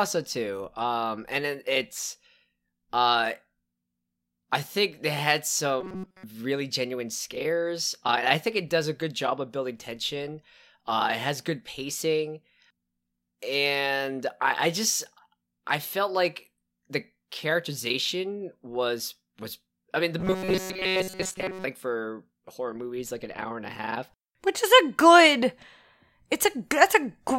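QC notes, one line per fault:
5.81–6.23 s, robotic sound from repeated short buffers: right after "I think they had" the speech collapses into a hard metallic buzz at 188 Hz until "really genuine scares", with essentially the whole stretch made of repeats. Likely new audio arrived too slowly, so a tiny chunk of about 5.3 ms kept looping, and that loop rate is the pitch you hear.
20.19–21.64 s, robotic sound from repeated short buffers: same 188 Hz buzz, longer this time, between "was I mean the" and "for horror movies like". Most of it is looped rather than fresh audio, so the underlying speech shape pokes through a bit more, but it's still that rigid, pitch-locked drone.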